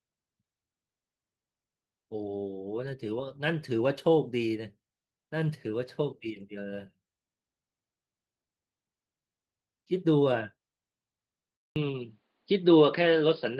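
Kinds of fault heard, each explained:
Input switched to a poorer device: at 11.56 s the sound drops out for about 200 ms and returns through what is likely a different microphone, with nothing above 5.1 kHz, a level shift of a few decibels and a faint new noise floor far below the speech. The light, fullband Opus coding runs throughout without narrowing the band. This change is abrupt, arrives with a gap, and alters tone, level and noise together until the end.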